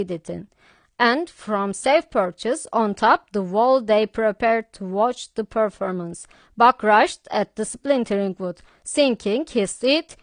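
Throughout, the likely cause is low-bitrate audio saved at a high bitrate: detail lost in an earlier lean encode stays lost, leaving the speech dull, with nothing above 9.6 kHz.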